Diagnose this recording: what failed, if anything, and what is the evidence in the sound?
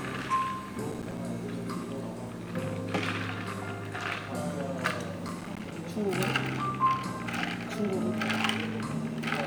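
Processor overload crackle appears twice, from 0.92 to 1.18 s and again from 5.28 to 5.71 s. This is a driver or buffer stage failure. Within each stretch the sound breaks into a rapid gritty crackle made of around ten short dropouts to silence, each with hard edges. The spacing points to buffers of roughly 5 ms that the processor failed to fill in time. Each missed deadline left a silent hole, and the crackle stops once the load eases.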